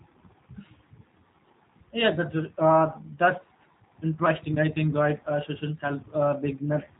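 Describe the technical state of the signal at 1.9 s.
At 1.9 s the speech carries G.729 codec damage, present throughout. Each 10 ms frame is rebuilt from a vocal tract filter, pitch predictor and sparse pulses, fitting 8 kbit/s, so it sounds plainly rough and synthetic. A spectrogram shows nothing above 4 kHz.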